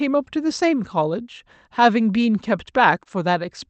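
At about 3.03 to 3.07 s there's a short concealed packet loss: roughly 20 ms of the call arrived too late to decode, so the receiver patched the hole by extending the preceding sound before blending back, leaving a quick smear or wobble in the speech. It rides on the call's Opus coding, band-limited around 8 kHz.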